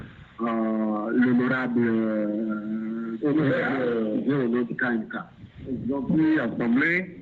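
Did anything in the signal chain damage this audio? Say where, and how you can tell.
No, nothing in the signal chain damaged this audio.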